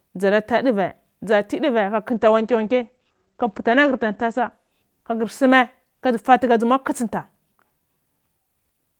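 From 2.12 to 8.09 s there's a call bitrate drop: the speech goes muffled and rough, with highs cut above 8 kHz, which fits roughly 48 falling to 13 kbps.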